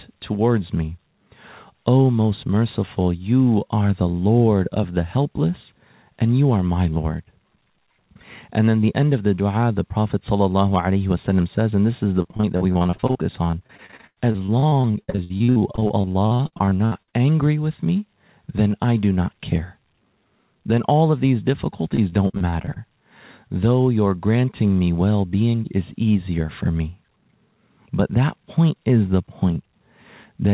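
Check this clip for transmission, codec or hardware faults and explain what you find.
There's one fault here, repeated packet loss with that robotic sound, in two stretches: 12.22 to 17.15 s and 21.95 to 22.78 s. The packets kept dropping or arriving late, and each hole got patched by stretching the last bit of speech before the next dropout hit. In the first stretch about 31% is concealed, with gaps up to 96 ms, so it sounds choppy. The second is shorter and milder, about 22%. Underneath, the band stops at 4 kHz, which points to a G.711 A-law call path.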